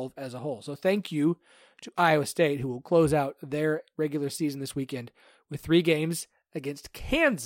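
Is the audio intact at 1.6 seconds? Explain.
Yes, the speech at 1.6 seconds is intact, with no audible fault at that moment.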